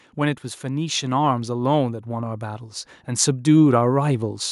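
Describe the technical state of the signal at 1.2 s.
At 1.2 s you're in the middle of an automatic gain rising stretch that runs from about 0.16 s to 4.45 s. The gain control judged the input too quiet and keeps pushing it up, about 10 dB overall, so the speech and the background swell together.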